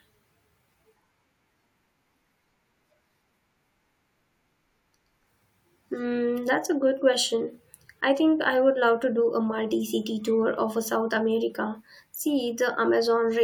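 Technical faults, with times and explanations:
No technical faults can be heard in this speech.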